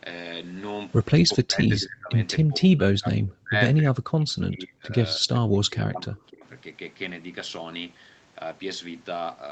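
Speech that sinks by as much as about 40 dB in four stretches, 1.25–2.12, 2.42–3.55, 3.81–4.94 and 5.16–6.46 s, is speech suppressed in double talk, likely an echo canceller muting the near talker against far-end speech. The attenuation covers roughly 0.7 s of the first stretch and about 1 s of each of the others, unlike clean packet-loss gaps.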